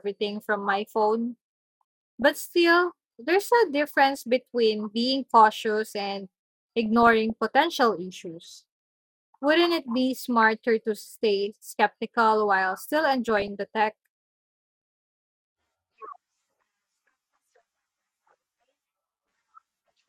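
DAB burbling breaks into this speech clip at 2.22–2.25 s, 4.17–4.23 s, 6.83–7.30 s (after "between being cautious and"), 10.41–10.52 s (before "to stay skeptical while"), 13.13–13.48 s and 19.15–19.49 s. It points to weak reception leaving a bit error rate of about 0.15 to 0.3 percent. Corrupted MP2 samples then add short noise blips in single sub-bands, and wrong scale factors make sub-bands jump in level for up to a frame.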